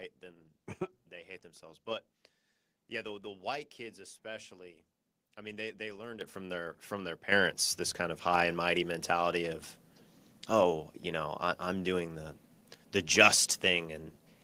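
The microphone volume is stepped up three times: about 10 dB at 6.21 s, about 8 dB at 7.32 s, and about 3 dB at 8.34 s. Software judged the input too quiet. It raised the device gain in single jumps. Speech and background get abruptly louder together.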